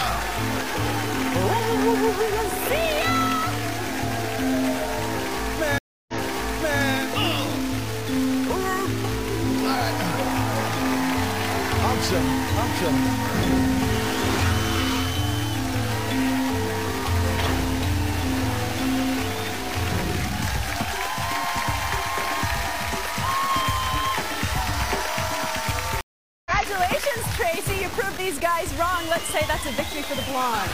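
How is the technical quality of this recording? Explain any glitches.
The technical quality is poor, with two problems. A coarse grain runs through the whole recording, and the playback breaks and restarts twice.

Low bit depth without dither, throughout: the grit sounds like the signal is stored in very few bits, which fits about 4 bits. The likely cause is rounding by truncation with no dither added. Because the error tracks the signal rather than masking it, quiet passages sound gritty and sputtery, and dense passages carry a near-steady hiss only about 15 dB below the sound itself.

Stream reconnect, 5.78 to 6.81 s and 26.01 to 26.51 s: each time the connection dropped, the player went quiet, reconnected and started a new decoder partway through the stream, so the restart fades in. At 5.78 s the silence lasts 0.3 s, and playback resumes 0.725 s earlier, repeating a stretch of sound. 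At 26.01 s the gap is 0.45 s, and the audio picks up about half a second later, skipping material.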